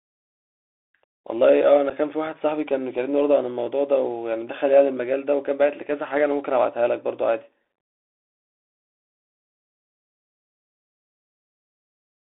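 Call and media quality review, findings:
Bluetooth CVSD headset codec, whole clip: speech carried over the narrowband headset link at 64 kbps, one bit per sample steering a slope-adaptive step. Audio confined to roughly 250 Hz to 3.6 kHz, so no air above the band. Plainly audible coding damage: the adaptive step lags on loud bright onsets and smears them, sibilants turn scratchy, and a fine granular hiss sits beneath the speech.

Unconcealed Bluetooth headset packet loss, 1.90 to 1.92 s: a voice packet between headset and phone dropped with no concealment, and filler replaced it. The result is a hard-edged hole of about 7.5 ms, consistent with a single lost packet, with an abrupt cut-out and re-entry. The speech resumes briefly quieter as the CVSD decoder's step size rebuilds after the gap.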